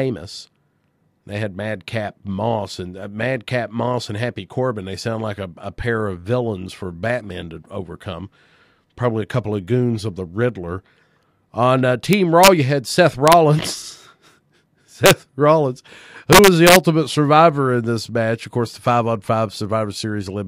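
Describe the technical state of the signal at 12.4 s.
At 12.4 s the speech breaks into harsh, violent cracks on its loudest moments, far sharper and more abrupt than ordinary clipping. This is integer overflow, running from 12.13 to 12.48 s. The signal was pushed about 2 dB past the largest value the integer format can hold, and instead of being limited there, each peak that crosses the ceiling wraps around to the opposite extreme, producing a full-range jump heard as a crack.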